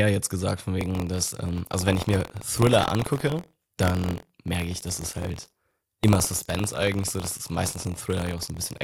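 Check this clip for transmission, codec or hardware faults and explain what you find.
One hardware-side fault is present: buffer tearing, from 0.79 s to the end of the speech. The software filling the ring buffer and the hardware draining it have drifted out of step, so their positions cross inside each period. A small sliver of every buffer is left holding audio from about 50 ms earlier, with hard joins at both edges. The result is a steady robotic buzz at 43.1 Hz, which fits a 1024-sample buffer, riding on the speech only while sound is present.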